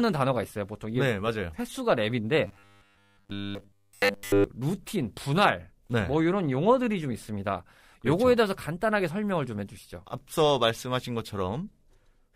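From 2.47 to 4.44 s there's robotic sound from repeated short buffers: a rigid 100 Hz metallic buzz, likely from a 10 ms chunk being looped while nearly all the real audio gets skipped.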